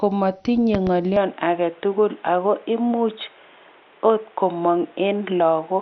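From the start, the speech has likely passed through MP2 compression starved of bits, which fits a rate near 48 kbps. Upper sub-bands are shut off entirely above 6.2 kHz, and the surviving bands are coarsely quantised, leaving the sound dull with a heavy, gurgling graininess throughout.

Between 0.75 and 0.90 s, a sudden electrical transient, likely from a plug, switch or static discharge, is added to the signal. It is heard as a loud pop, two sharp clicks in quick succession, roughly 10 dB above the speech, which carries on underneath.

At 1.16 s, the recording input likely switched to a poorer device, and stays there to the end. Its narrower passband cuts everything above 3.8 kHz, so the speech turns boxier and duller at once, with no gap and little level change, and a fresh noise floor about 30 dB down appears.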